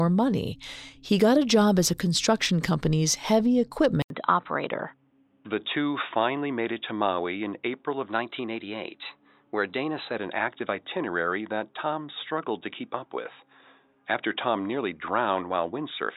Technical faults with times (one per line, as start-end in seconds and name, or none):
4.02-16.17 input switched to a poorer device
4.16-4.70 drift correction step
8.10-10.16 drift correction step